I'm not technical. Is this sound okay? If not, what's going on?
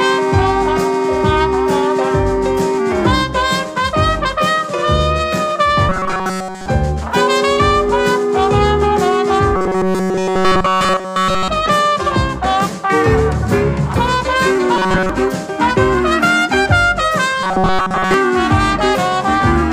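No. Four stretches have robotic sound from repeated short buffers: 5.89 to 6.66 s, 9.56 to 11.49 s, 14.76 to 15.09 s, and 17.43 to 18.14 s. The sound becomes a stiff, metallic buzz at 188 Hz, likely because new audio arrived too late and a tiny slice, about 5 ms, was replayed over and over. Unlike a plain dropout, the sound doesn't go silent. It keeps a fixed buzzing pitch, constant in the first three stretches and most of the last.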